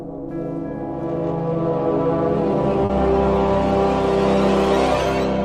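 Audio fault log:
2.85 to 2.91 s, short concealed packet loss: about 40 ms of audio failed to arrive in time, so the decoder filled the gap by extending the preceding sound, then crossfaded back into the real signal. The ear hears a brief smear or wobble where fine detail should be. On a spectrogram, the patch shows smoothed, repeated harmonics or blurred noise with no sharp onsets.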